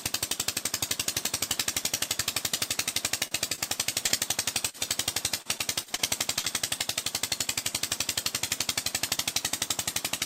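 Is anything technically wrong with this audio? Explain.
Yes. There are four kinds of network-transport fault, all between about 3.3 and 6.5 s.

Short stalls from a late packet at 3.27–3.34 s and 3.55–3.61 s: packets arrived late, so the receiver held the last sound for 39 ms and then 27 ms before carrying on from the same point. Nothing is lost. Unlike concealed loss, you hear a brief drawn-out hold and the sound then continues without a skip.

Short concealed packet loss at 4.06–4.12 s and 6.39–6.46 s: about 40 ms of audio never arrived each time. The decoder filled the hole by extending the previous sound and then crossfaded back. Unlike a stall, the sound resumes further on, so it comes across as a small smear or wobble with a sliver missing.

Burst of packet loss at 4.69–4.77 s: consecutive packets were lost, roughly 40 ms of audio, patched over 45 ms by a continuation that fades as it goes. 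Unlike the single concealed losses, the patch is longer and audibly decays into a held buzz or hiss before the audio jumps ahead.

Repeated packet loss (robotic sound) from 5.42 to 6.02 s: four separate gaps, the longest 37 ms, leave about a fifth of this stretch concealed and about 120 ms missing in total. The gaps recur quickly rather than occurring once, so the patches run together into choppy audio with pieces missing.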